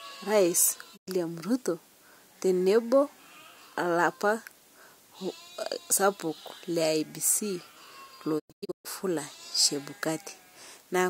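At 0.96 s the speech fades out over 20 ms and stays silent for about 0.1 s. From 8.38 to 8.87 s it breaks into several short holes, the longest 128 ms. That's digital broadcast dropout: the receiver muted on bad frames, so that audio is simply gone.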